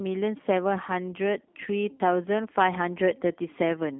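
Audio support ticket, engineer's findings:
G.729 codec throughout, whole clip. Speech rough, slightly synthetic, buzzy; nothing above 3.6 kHz, line band about 200 Hz to 3.5 kHz. Probable component: VoIP leg, which fits an 8 kbit/s G.729A link. Mechanism: speech rebuilt from vocal tract filter, pitch predictor and sparse pulses per 10 ms frame. Differs from a plain telephone band filter, which would be dull but clean; here the coding roughness itself is plainly audible.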